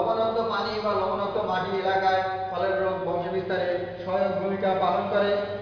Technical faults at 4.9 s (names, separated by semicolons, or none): none